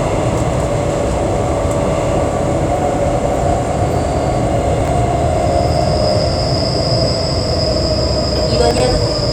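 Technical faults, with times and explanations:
4.81–4.88 s and 8.71–8.80 s, chunks out of order: a roughly 23 ms block of sound plays about two and three blocks late, so the sequence is briefly jumbled across hard joins.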